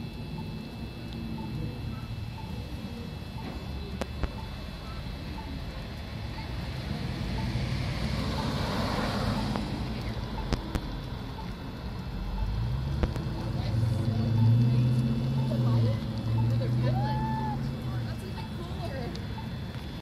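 Loud pops, peaking about 20 dB above the sound, occur as pairs at 4.02–4.26 s, 10.53–10.78 s and 13.03–13.19 s, and singly at 9.56–9.59 s. The sound continues underneath. Likely cause: voltage steps from a plug, switch, static or driver glitch.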